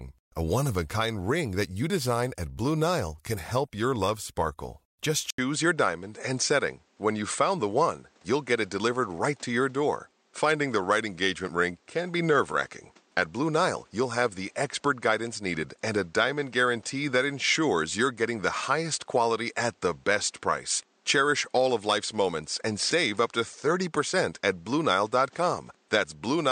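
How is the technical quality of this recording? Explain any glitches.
The recording has one clear fault. At 5.30 s, after an 80 ms gap, the speech turns duller: nothing remains above 9 kHz, and a new noise floor sits roughly 35 dB down. The level stays much the same. The likely cause is the input switching to a poorer device.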